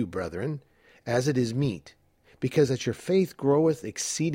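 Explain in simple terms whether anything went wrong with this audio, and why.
Nothing went wrong with this speech recording. Listening all the way through, nothing stands out as different from how an ordinary recording should sound.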